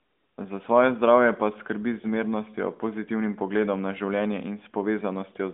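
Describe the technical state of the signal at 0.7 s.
At 0.7 s the speech is intact, carried through the narrowband mobile path with its usual telephone-band sound and no fault at that moment.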